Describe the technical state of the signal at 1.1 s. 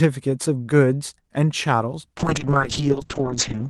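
At 1.1 s the speech is intact, with no dropout, glitch or distortion, just the ordinary character of a normally working WebRTC call path.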